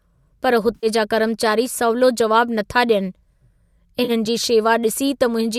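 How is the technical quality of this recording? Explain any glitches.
Two short dropouts, both AAC frame loss with concealment, mar the speech, which comes through a low-delay AAC path, likely AAC-ELD, with light codec damage.

From 0.75 to 0.87 s, just before "जा कर्मचारी सवलो जवाब", and from 4.04 to 4.11 s, the decoder lost frames (a gap that fits roughly 10 ms frames) and rebuilt them from the last good spectrum with scrambled phase. Each patch sounds briefly smeared and noisy. On a spectrogram it shows as blurred, frozen bands. In the waveform it appears as a flattened envelope.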